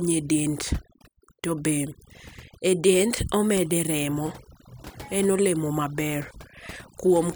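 From start to finish, the background between phrases sinks to near silence scattered with twinkling specks. This is overdone noise removal: a noise reduction stage set too aggressively pulls individual frequency bands far down or shuts them off whenever they sit close to its estimate of the noise floor. Quieter parts of the speech fall inside that threshold and get stripped away along with the noise.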